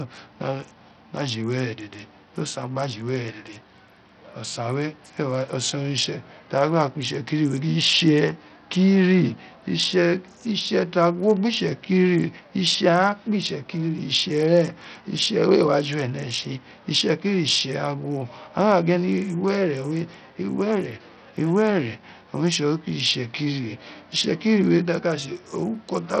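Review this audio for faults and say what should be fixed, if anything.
Likely Bluetooth SBC compression, throughout: nothing above 10 kHz, with heavy gritty noise and flickering treble, pointing to a starved bit pool at a bitrate of about 64 kbps. Record over a wired or higher-quality link instead.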